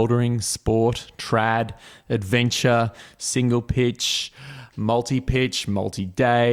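No technical faults can be heard anywhere in the recording.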